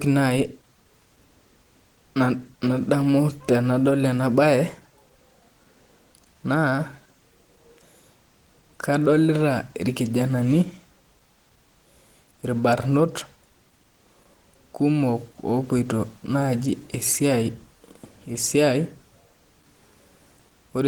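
A speech recording with plainly audible codec damage from start to finish. The voice sounds hoarse and muffled, with a grainy, rough texture. The top end is not cut off, and content reaches about 20.2 kHz. This points to Opus compression, likely in its hybrid speech mode. At a bitrate as low as about 16 kbps, the encoder runs short of bits and fills bands coarsely, which roughens the voice.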